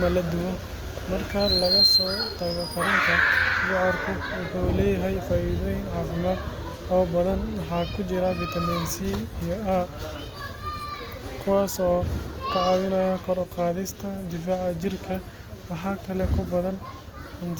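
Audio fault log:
throughout Opus compression: speech is plainly grainy and rough, with noise-filled upper bands reaching 20.4 kHz. This is likely low-rate CELT-mode coding, consistent with about 24 kbps.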